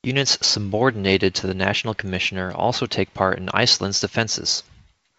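No faults are audible in the speech, which comes over a G.722 wideband telephone path at 64 kbit/s with nothing above 7.2 kHz.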